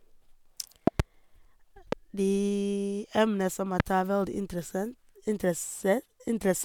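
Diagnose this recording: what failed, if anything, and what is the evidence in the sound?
Loud pops break into the speech three times. At 0.87 to 1.02 s there are two pops in quick succession, peaking about 20 dB above the signal. A single pop at 1.92 to 1.95 s, just before "de emner som", reaches about 15 dB. Another at 3.80 to 3.82 s, just after "de emner som", reaches about 25 dB. The speech carries on underneath each one. The likely cause is a sudden voltage step in the analogue wiring, from a plug, switch or static discharge.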